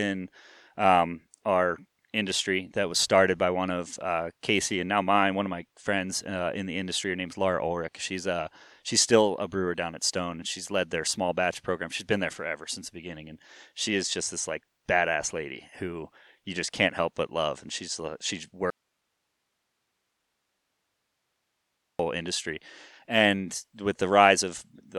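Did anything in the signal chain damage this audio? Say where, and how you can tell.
Yes. The speech cuts out abruptly at 18.70 s, just after "she's she", and returns at 21.99 s, about 3.3 s later. This is an audio dropout to a faint residue: the gap holds only hiss, about 50 dB below the speech. The stages after the break stayed live while the source feeding them was lost, most likely an intermittent connection in the analogue wiring. The hard edges rule out a natural pause or a fade.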